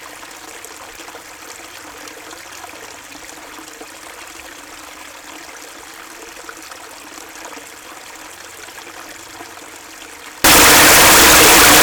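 From 10.44 s to the end at 11.83 s, the sound becomes loud, harsh distortion with quiet parts as loud as the rest, likely signed and unsigned mixed up on the 8-bit samples; the waveform jumps across the whole range at each crossing, and the spectrogram fills broadband.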